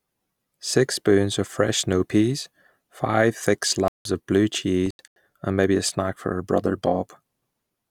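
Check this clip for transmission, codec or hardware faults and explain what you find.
Two faults appear: two stretches of corrupt frames muted, and a stretch of corrupt FLAC frames.

Corrupt frame muted, 3.86 to 4.05 s and 4.86 to 5.16 s. Damaged compressed frames were rejected by the decoder, and the player substituted silence, so the speech drops out abruptly for about 0.19 s and then about 0.3 s. Each gap's length fits a run of several frames. Timing is preserved, so speech resumes on schedule. On a waveform each gap is a flat line with sharp edges. A spectrogram shows full-height blank columns.

Corrupt FLAC frame at 6.15 s. A flipped bit inside the frame sent the decoder's prediction off with wrong values, and the checksum was not checked, so the error played out. Here the damage is tiny, a very faint tick peaking at about -54 dBFS and lasting only a couple of milliseconds. The following intact frame decodes cleanly. 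On a waveform it is a barely visible spike. On a spectrogram it appears as a thin, faint vertical line.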